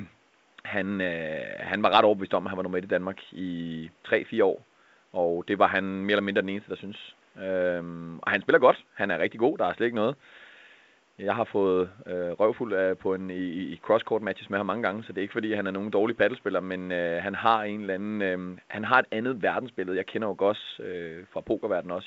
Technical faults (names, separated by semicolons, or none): none